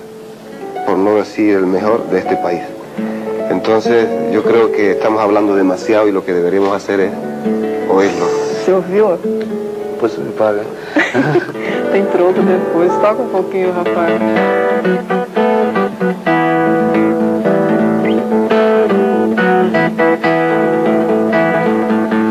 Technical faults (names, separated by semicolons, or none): none